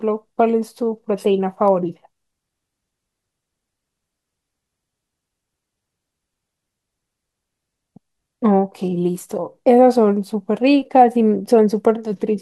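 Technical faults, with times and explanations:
1.68 s, electrical switching spike: a sharp snap lands on top of the speech, peaking at around -25 dBFS. It is most likely a nearby switch, motor or static discharge arcing briefly and coupling into the audio line. What separates it from a digital dropout or buffer glitch is that nothing is removed. The speech runs on underneath without a gap or jump, and the snap is simply added over it.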